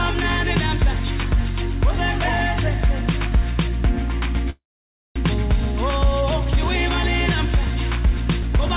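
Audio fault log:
4.50–5.18 s, call audio freeze: packets were likely held up in transit and the jitter buffer ran dry. The receiver stretches the last sound into a brief fading buzz or hiss, then 0.56 s of silence. The audio resumes where it stopped, with nothing lost but 0.66 s late.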